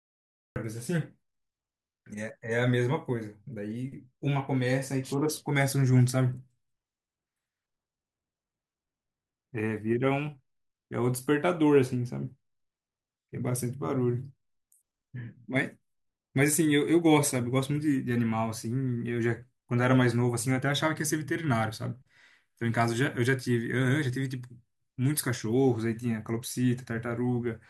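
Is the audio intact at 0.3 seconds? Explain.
No. At 0.3 seconds there is only dead digital silence, and at 0.56 s the speech bursts in mid-sound with no natural onset: a cut-off start, where recording began late.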